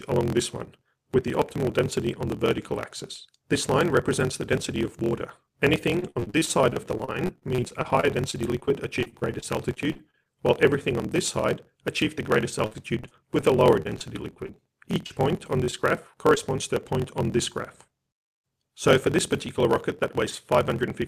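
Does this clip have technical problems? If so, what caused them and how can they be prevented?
Yes. A block size mismatch (truncated) runs throughout: a steady 43.1 Hz buzz, with the audio playing 1.12 times fast at near-normal pitch. This fits a stage reading 1024-sample blocks and discarding the rest of longer blocks. Matching block sizes between stages prevents it.

Repeated packet loss (robotic sound) makes 5.99–10.27 s and 12.66–15.74 s choppy, with gaps up to 52 ms patched by continuing earlier sound. A larger jitter buffer or a more reliable network link prevents it.

Short concealed packet loss at 16.35–16.38 s causes a brief smear where about 20 ms went missing and was filled by extrapolation. Forward error correction or a steadier connection prevents it.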